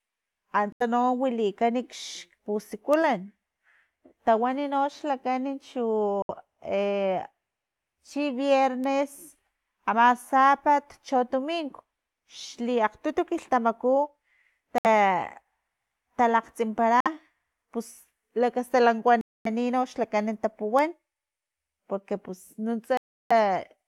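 The speech cuts to dead silence six times, at 0.72, 6.22, 14.78, 17.00, 19.21 and 22.97 s, then resumes. The first four gaps are short, about 80, 69, 66 and 53 ms, and the last two run longer, 242 and 332 ms. These are likely Bluetooth stalls: interference held back packets, the headphones' buffer emptied, and playback halted until the resent audio arrived.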